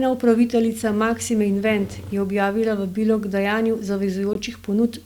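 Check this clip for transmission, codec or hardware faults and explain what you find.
One transmission fault is present. At 4.33 s, just after "objavila vabilo k dajanju", there is a gap between stream segments. The time stamps of adjacent segments leave about 18 ms uncovered, and the player fills it with silence. The speech stops abruptly in a short, hard-edged hole, and nothing is lost.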